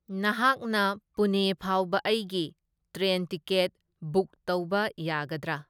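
No technical faults can be heard anywhere here.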